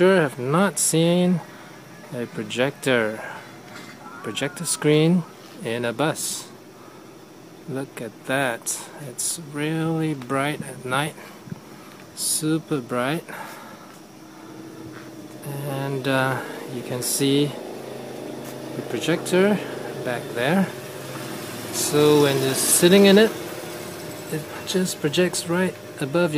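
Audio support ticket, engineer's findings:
No faults found on this audio; nothing to report in the findings.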